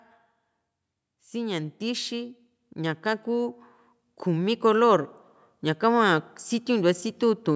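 From 1.07 s to 3.62 s there is automatic gain rising. The gain control judged the input too quiet and lifted its level by about 5 dB. Voice and background swell together over those two and a half seconds, through a call-style chain with nothing above 8 kHz.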